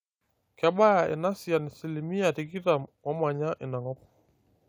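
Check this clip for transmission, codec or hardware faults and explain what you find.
No transmission, codec or hardware fault can be heard anywhere in this speech recording.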